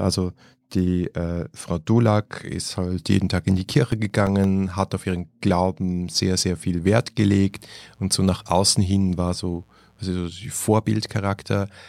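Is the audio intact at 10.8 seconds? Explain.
Yes, the audio is intact at 10.8 seconds, with no fault heard at that moment.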